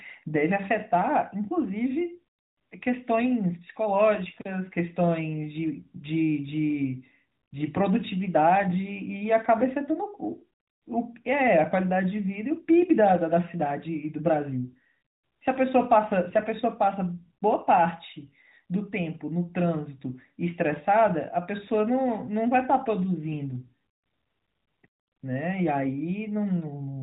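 A speech clip carried over the AMR narrowband mobile codec, with nothing above 4 kHz. From 16.30 to 16.49 s, AMR bit errors flip a few percent of the weakly protected bits across roughly nine 20 ms frames, so the voice briefly turns hoarse, scratchy and gargly while keeping its pitch and level.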